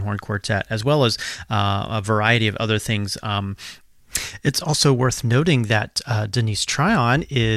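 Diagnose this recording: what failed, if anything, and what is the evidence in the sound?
Nothing in the recording points to a failure at any stage. The speech carries no audible event that would mark a fault in the chain.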